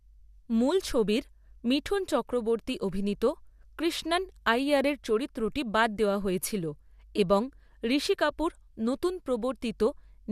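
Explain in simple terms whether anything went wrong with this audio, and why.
Nothing went wrong with the recording: the speech signal stays steady and intact all the way through, with no breaks, jumps or other technical problems anywhere in it.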